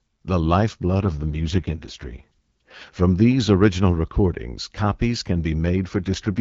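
From 1.02 to 2.96 s, and again from 6.03 s to the end of the clip, the speech turns rough, buzzy and synthetic while keeping its bandwidth and with no gap. This is an AMR rate drop: a weak radio link pushes the AMR-WB codec down to a lower rate so more bits go to error protection. The sound fits a drop from 12.65 to 6.6 kbit/s. Between the drops, speech returns to the lightly coded HD Voice quality.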